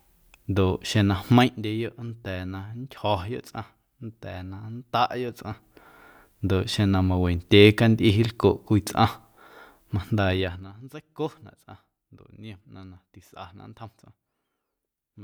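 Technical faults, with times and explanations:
1.23–1.58 s: zipper noise. The level falls about 10 dB in 2 dB jumps, roughly fifteen a second. Each jump ticks, unlike a smooth fade.
5.22–5.90 s: zipper noise. The level rises about 10 dB in 2 dB steps, around ten a second. The ticking is slower and sparser, not random clicks.
10.31–10.73 s: zipper noise. The level drops about 20 dB in 2 dB steps, roughly thirty a second. The steps blur into a buzzy zipping rather than a clean fade.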